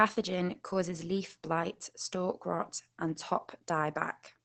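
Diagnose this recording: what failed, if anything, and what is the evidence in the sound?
The failure is at the codec stage: Opus voice compression running its SILK linear-prediction coder at a low rate. Throughout the speech, the damage is plainly audible. The top end stops around 20.8 kHz, and the coarse excitation coding gives the voice a hoarse, slightly robotic buzz. That combination fits wideband SILK at about 12 kbps in 20 ms frames, where too few bits reach the residual.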